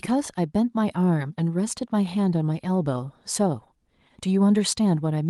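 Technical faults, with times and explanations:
No technical faults found; the speech comes through a call path whose top end stops near 12 kHz, consistent with a super-wideband Opus setting.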